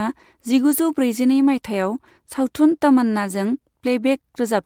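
No technical faults are audible.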